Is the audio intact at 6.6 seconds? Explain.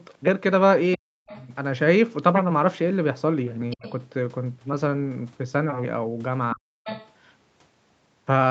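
No. From 6.54 to 6.87 s the speech is cut back by what is most likely speech suppressed in double talk. With both ends talking at once, the echo canceller could not tell the near talker apart from loudspeaker echo and pulled the whole signal down. The voice thins and drops out in pieces for about a third of a second, sinking by as much as roughly 40 dB at its deepest.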